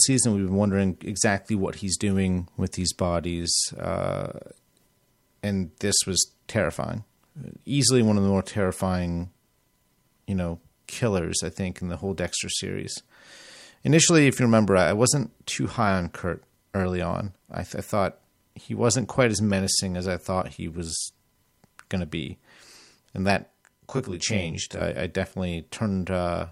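Speech where, from 23.42 to 24.81 s, one channel lags the other by around 20 ms before mono summing, producing channel delay (comb filtering): rough, slightly doubled sound with notches from around 30 Hz upward.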